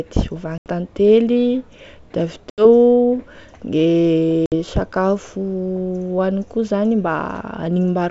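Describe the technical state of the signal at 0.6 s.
At 0.6 s the speech drops into a hard-edged silent gap running from about 0.58 to 0.67 s, and when it resumes it is slightly rough before it steadies. This is packet loss on an ADPCM call: around 80 ms of audio, a handful of packets' worth, went missing and was filled with silence. Because the G.722 wideband stream's ADPCM decoder tracks its predictor and step size from the data it receives, it falls out of step with the sender during the gap and takes some tens of milliseconds to realign.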